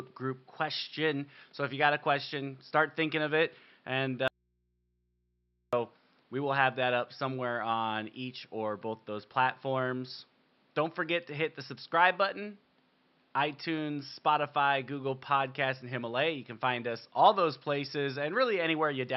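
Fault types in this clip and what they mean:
Audio dropout to a faint residue: speech cuts out abruptly for 1.45 s from 4.28 s, leaving only mains hum roughly 45 dB down, likely from an input left live after a signal break.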